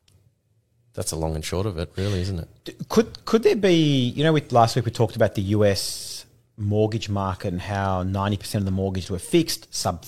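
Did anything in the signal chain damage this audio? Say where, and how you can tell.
No, nothing in the chain has left a mark on this speech that you can hear, so there's no damaged stage to point to.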